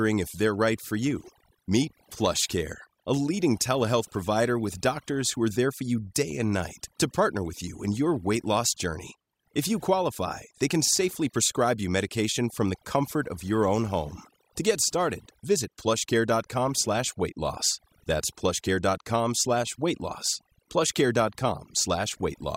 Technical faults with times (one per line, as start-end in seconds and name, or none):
0.00-22.57 overdone noise removal